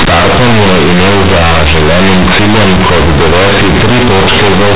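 From start to end, the speech's companded A-law bytes are read as linear 8-bit samples without expansion, giving loud, harsh, buzzy distortion and heavy noise through the pauses.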